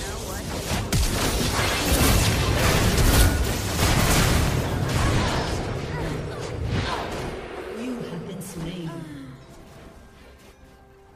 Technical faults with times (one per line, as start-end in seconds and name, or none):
1.24 compressed frames skipped
8.40 compressed frames skipped